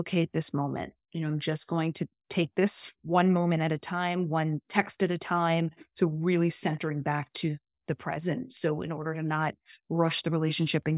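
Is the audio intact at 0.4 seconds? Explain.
Yes, at 0.4 seconds the speech plays through cleanly, with no dropout, click, distortion or other fault to be heard at that moment.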